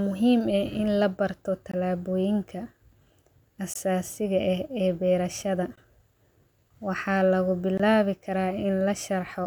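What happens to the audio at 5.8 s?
Right after "ee berashaada" there's a gap between chunks, a hole of about 20 ms from 5.76 to 5.78 s. The speech was delivered in 2-second chunks, and silence was left between them, so the audio is cut briefly at the join without losing any content.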